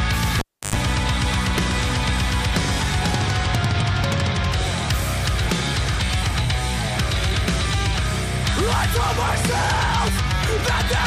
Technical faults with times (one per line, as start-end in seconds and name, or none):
0.39-0.76 cable pulled and plugged in